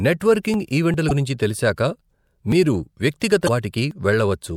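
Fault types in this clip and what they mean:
Damaged data in a compressed stream: a stretch of the encoded speech stream arrives corrupted, so the decoder reads garbage where a valid frame should be, loses its place in the stream and has to hunt for the next frame header before normal decoding resumes. Here it happens twice, from 1.07 to 1.11 s and from 3.45 to 3.49 s, each time cutting in as a short chirp, squawk, click or hole lasting about 40 ms.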